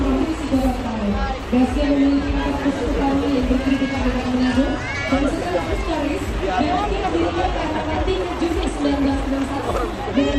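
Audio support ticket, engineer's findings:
Computer activity noise, present throughout. Buzzing, scratchy pulse train at roughly 150 Hz, sitting about 25 dB under the signal. Rises and falls with machine activity, not with the audio content. Probable component: shared ground between the computer and the audio interface. Mechanism: CPU, GPU or mouse load changes draw current through that ground, shifting the reference the audio circuit measures against. Those shifts ride into the signal as chirps and buzz. Check grounding and isolate the interface.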